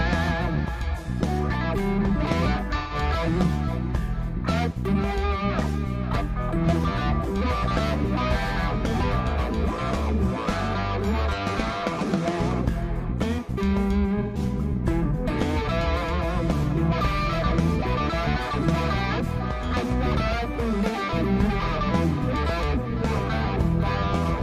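At 2.78 to 2.95 s and again at 14.22 to 14.38 s, AAC frame loss with concealment produces a brief smeared, noisy patch. In each case about 128 ms of coded data went missing, which fits three consecutive frames. The decoder rebuilt the gap from the last good spectrum with randomised phase, so the sound turns grainy and phasey rather than dropping out, then normal decoding resumes.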